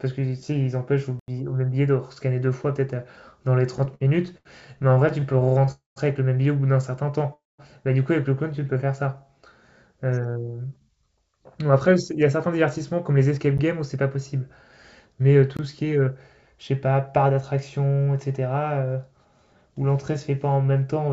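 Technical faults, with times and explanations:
1.20 to 1.28 s, block of digital silence: the speech drops abruptly into an 85 ms hole, as a block of samples came out as zeros, most likely the output buffer not being filled in time; the length fits a 4096-sample block.
3.78 to 5.69 s, repeated stalls (stutter): the speech drags and stutters through 18 small hitches, the longest 76 ms, as late packets kept emptying the jitter buffer and the receiver stretched the last sound each time, about 323 ms in all, with nothing lost.
5.71 to 5.98 s and 7.34 to 7.60 s, call audio freeze: each time the speech halts for roughly a quarter second, continuing as a fading buzz that goes silent for 150 ms and 180 ms respectively, then resumes where it stopped, likely packets held up in transit draining the jitter buffer.
8.51 to 8.79 s, jitter buffer slow-down: the speech briefly runs at 89 percent speed with unchanged pitch, sounds slightly drawn out, as the receiver repeated single pitch periods to add 36 ms and rebuild its buffer reserve.
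10.36 to 14.50 s and 15.21 to 17.39 s, jitter buffer speed-up: the speech sounds slightly hurried at the same pitch, at 108 and then 106 percent speed, as the receiver cut short pitch-period pieces, around 300 ms and 150 ms, to shrink an overfull buffer.
13.58 s and 15.57 s, block of digital silence: a brief tick and a short hole where the audio snaps to zero and back, 14 ms and 21 ms long, the second fitting a 1024-sample block left unfilled.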